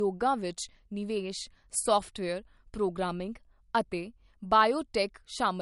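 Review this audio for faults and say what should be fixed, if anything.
Across the whole recording the speech sounds dull and swirly, with nothing above 11.2 kHz and a watery smear. The likely cause is low-bitrate audio saved at a high bitrate: the sound points to an MP3 first encoded at around 50 kbit/s, which cut the top end and left its artefacts, then re-encoded at a high rate such as 320 kbit/s, which made the file larger but could not restore what was already lost. To prevent it, encode from the original uncompressed source at the intended bitrate rather than re-encoding an existing low-bitrate file.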